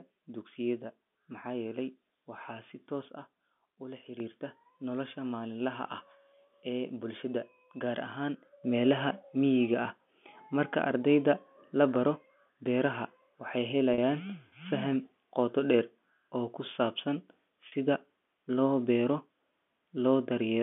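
Sudden gain jump at 3.08 s: the sound and its background noise drop together by about 6 dB in one step and come back up at 4.2 s. A second jump at 8.64 s raises the level by about 6 dB and holds to the end. These are likely gain changes applied without a ramp.

Packet loss with pitch repetition at 13.94 s and 17.68 s: each gap of about 40 ms, consistent with two lost packets, is bridged by repeating the last pitch period. The result is a brief held, buzzy sound within the 200 Hz to 3.5 kHz telephone band.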